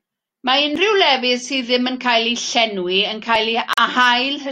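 At 3.73 s the speech drops out abruptly and comes back at 3.79 s. This is a digital broadcast dropout. The receiver stopped getting usable data and muted its output until valid frames arrived again. The gap is brief, about 43 ms of missing audio. That length points to a single lost frame. The hole sounds like a short cut to silence. Whatever was spoken in that instant is simply gone, and the speech then returns.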